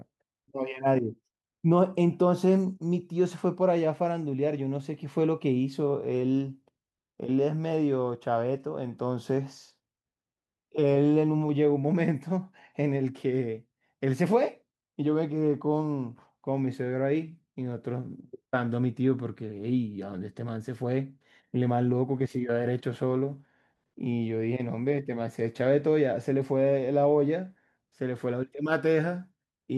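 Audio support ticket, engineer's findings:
No faults found in the speech recording. Nothing to trace to any component.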